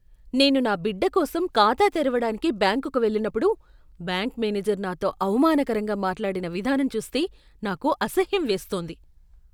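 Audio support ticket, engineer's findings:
No faults found in playback.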